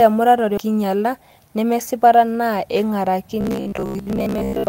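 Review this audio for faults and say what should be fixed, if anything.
At 0.57 to 0.59 s the speech jumps ahead. This skip ahead drops about a second of audio and splices both sides almost directly together.

From 0.67 to 2.23 s a jitter buffer speed-up runs the speech at 108% speed with pitch unchanged. Removing short pitch-period slices totaling about 150 ms leaves it hurried.

From 3.41 to 4.67 s the speech becomes a rigid metallic buzz at 66.7 Hz. It is robotic sound from repeated short buffers, likely about 15 ms blocks replayed for most of the stretch because fresh audio arrived too seldom.

To prevent these, keep audio delivery steady and size the jitter buffer to absorb bursts, so it neither overflows nor starves.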